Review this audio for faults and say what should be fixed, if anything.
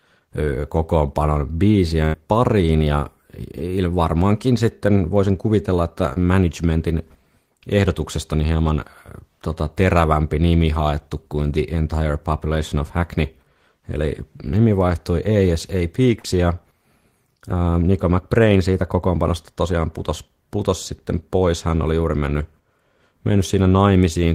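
A burst of packet loss runs from 2.05 to 2.15 s. About 80 ms of speech never arrived. The receiver extended the last sound and faded it, then resumed later, skipping that stretch. A larger jitter buffer with redundant coding would prevent it.

Short concealed packet loss occurs at 6.13 to 6.18 s and 16.20 to 16.26 s. The receiver filled gaps of 22 ms and 43 ms by continuing the previous sound. Each one is heard as a brief smear. Forward error correction would prevent these.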